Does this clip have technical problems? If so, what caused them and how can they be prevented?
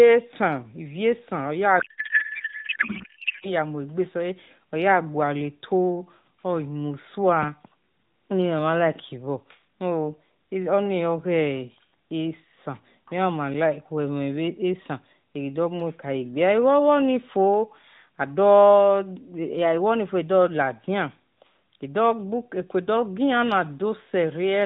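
Yes. From 1.80 to 3.48 s the speech turns into garbled noise and warble that barely tracks it. This is a codec payload misread: the AMR narrowband mobile codec stream, whose light band-limited character fits the 12.2 kbps mode, was packed in octet-aligned format but unpacked as bandwidth-efficient, so every field landed in the wrong bit positions and the decoder synthesised nonsense until the formats matched again. Preventing it means negotiating the AMR payload format explicitly in the session setup and enforcing it identically on both ends.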